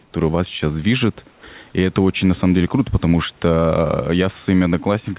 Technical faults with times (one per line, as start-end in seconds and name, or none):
0.00-5.19 gain pumping
0.02-0.14 comfort noise in place of the background
1.31-1.43 comfort noise in place of the background